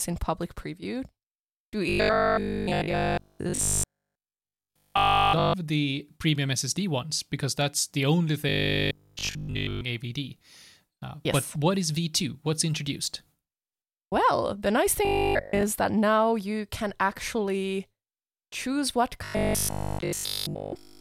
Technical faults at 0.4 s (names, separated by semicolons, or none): none